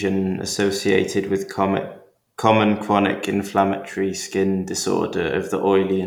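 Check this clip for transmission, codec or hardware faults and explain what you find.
No transmission, codec or hardware faults.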